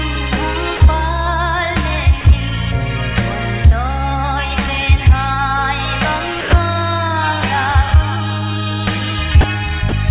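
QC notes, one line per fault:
0.77–0.80, 2.21–2.24, 6.41–6.53, 9.41–9.44 and 9.89–9.92 s: sound dropped by the voice detector. Short 30 ms gaps, plus a longer 120 ms one at 6.41, fill with flat comfort noise. The sender's detector likely mistook quiet stretches for background and paused sending.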